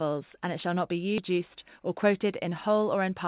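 At 1.18 to 1.2 s the speech makes a skip ahead. Roughly 0.7 s of audio is simply missing. Nothing fills the hole, so the two sides butt together with no gap. The join sounds abrupt, like a cut in tape. This is what happens when a jitter buffer drops a stretch of audio while later audio is already queued. Playback lands further on, and the delay falls by about the same amount.

From 1.3 s to 3.25 s a jitter buffer speed-up follows. The buffer is still holding more audio than it wants. To shed the excess, it trims tiny slices of one or a few pitch periods again and again. In total it removes roughly 150 ms. The speech runs at about 106% speed with the pitch unchanged. It sounds slightly rushed. The band stays capped at 4 kHz, as the G.711 call path gives.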